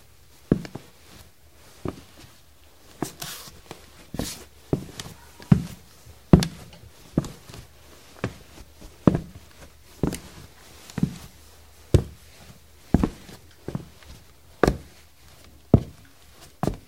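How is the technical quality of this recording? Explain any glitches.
There's one brief glitch, a touch of hard clipping at 15.74 s: a peak overshot the stage's limit by about 1 dB, got sliced flat, and gives a tiny crackle.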